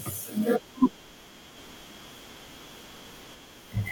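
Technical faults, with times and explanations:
1.57 to 3.35 s, doubled audio track: a second full-band copy of the speech runs about 0.7 s behind at roughly equal loudness, cutting in and out abruptly with no reverb tail, likely from a slower capture path or an edit leaving two offset copies.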